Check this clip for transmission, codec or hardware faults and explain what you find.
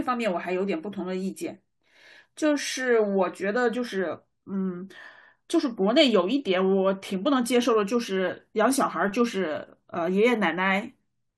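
No faults can be heard.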